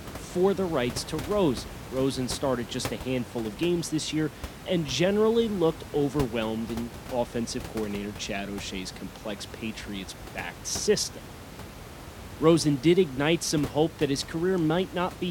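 No technical faults can be heard anywhere in the speech. The room noise stays in the background, about 14 dB below the voice, as part of the recording itself.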